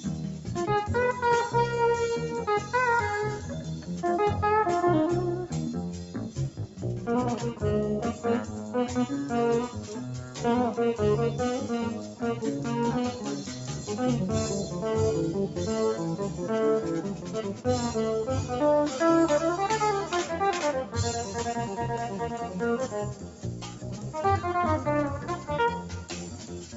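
A noise suppressor applied to music or sounds stays active for the whole clip. Built for speech, it treats held tones, ambience and decaying tails as noise. Attacks pass, but sustained parts sink, so the level pumps by around 10 dB. The sound cut by the noise suppressor is clearest at 0.0–0.49 s, 2.64–3.89 s, 6.03–10.39 s, 12.04–13.62 s, 15.48–17.66 s and 20.85–26.76 s. Each dip reaches about 6 dB. The longest stretches lose roughly one and a half and two seconds of sound. The call path's 8 kHz bandwidth is audible as a dull top end.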